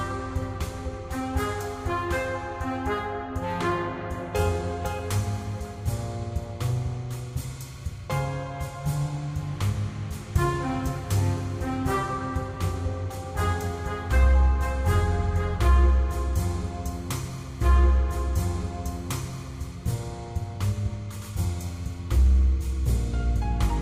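At 17.61 s a stream segment repeats: the player queued the same chunk twice, so 2 s of sound replays after a blip, showing as an identical spectrogram block beside a seam.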